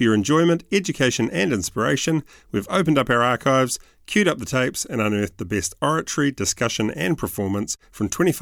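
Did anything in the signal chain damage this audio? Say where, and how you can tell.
No, nothing in this speech recording points to damage at any stage of the signal chain.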